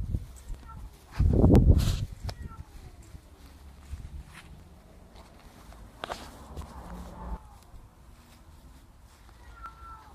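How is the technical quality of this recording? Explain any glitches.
The recording is marred by one recurring glitch: periodic USB or driver dropouts, from about 0.55 s to 9.66 s, repeating every 1.01 s, around ten times in all. At each one, something stalls the USB link or audio driver for a moment, and roughly 10 ms of audio is skipped outright rather than padded with silence. The splice over the gap leaves an evenly spaced tick or small pop, heard once a second across the clip.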